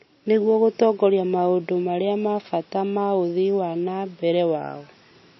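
Speech, and the whole thing carries plainly audible MP3 compression damage. The top end stops dead at about 5.8 kHz, so s sounds come out dull and lispy, and there's a watery, swirly quality where weak frequency detail flickers in and out between frames. That band limit and the amount of smearing fit a very low bitrate, somewhere around 24 kbps, and the likely culprit is an encoder starved of bits cutting the treble.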